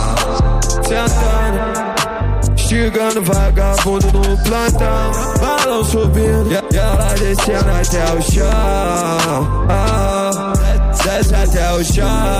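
No technical faults can be heard anywhere in it.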